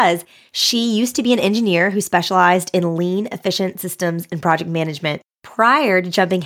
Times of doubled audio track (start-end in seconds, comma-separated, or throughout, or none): none